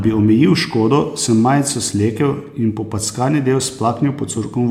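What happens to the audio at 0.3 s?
Nothing goes wrong at 0.3 s; the speech there plays through intact, with no dropout, click or distortion.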